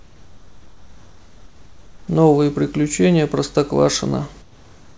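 From 0.00 to 2.08 s, and again from 4.42 s to the end, the background is replaced by comfort noise: a smooth, featureless hiss in place of a background sitting about 30 dB below the loudest speech, about 3 dB quieter than the real background in the first stretch and about 1 dB in the second. This is likely discontinuous transmission, where the sender pauses audio during silence and the receiver synthesises approximate noise in its place. The call path leaves nothing above 8 kHz.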